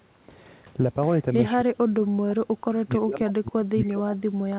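From 1.65 s to the end of the clip at about 4.6 s, the speech is pulled down hard, dipping, with the deepest drops around 35 dB below the surrounding level. This is likely speech suppressed in double talk: with both ends talking at once, the echo canceller could not tell the near talker from loudspeaker echo and attenuated both. The narrow band, with nothing above 4 kHz, fits the G.711 call path.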